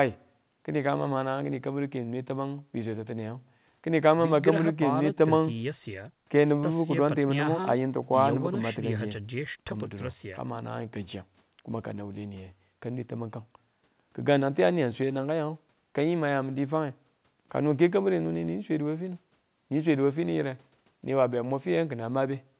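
No faults can be heard anywhere in this speech.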